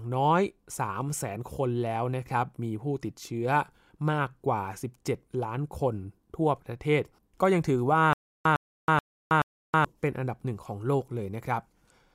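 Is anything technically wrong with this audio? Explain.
Yes. From 8.13 to 9.85 s, the speech breaks into a stutter with silent gaps. A burst of about 107 ms plays, then about 321 ms of digital silence follows. The pattern repeats every 428 ms, four times. The likely cause is a stalled player or stream that replayed its last fragment at each retry and then ran dry. The speech that belonged in that stretch never plays. It sounds like a mechanical, evenly paced stammer.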